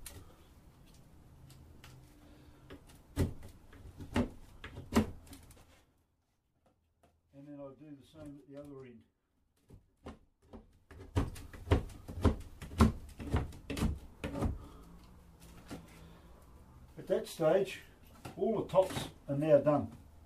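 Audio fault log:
5.48–6.18 s, zipper noise: the level drops about 20 dB in unsmoothed 3 dB steps, around ten a second, so each jump clicks and the fade ticks audibly.
10.64–11.29 s, zipper noise: the level rises about 20 dB in coarse 3 dB increments at roughly ten per second, each step leaving a small click that zips over the sound.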